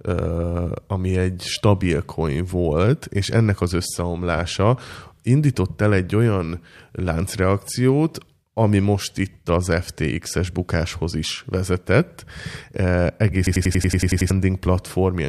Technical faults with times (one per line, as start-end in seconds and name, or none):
13.47-14.30 system hang loop